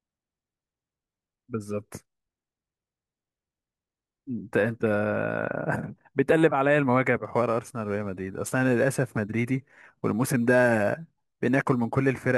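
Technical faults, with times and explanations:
7.25 to 12.38 s, crude rate conversion: samples are simply dropped without filtering, which fits a 48 kHz to 44.1 kHz change. The error repeats in a fixed pattern, adding an inharmonic fizz roughly 30 dB below the speech that follows louder, brighter syllables.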